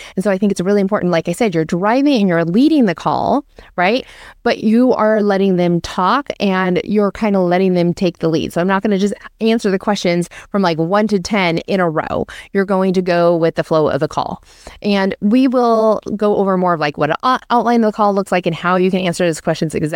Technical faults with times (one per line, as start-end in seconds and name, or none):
none